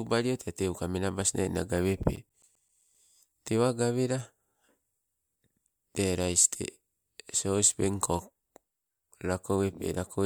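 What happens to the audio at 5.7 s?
At 5.7 s the speech runs on intact, with no dropout, click, distortion or other fault at that moment.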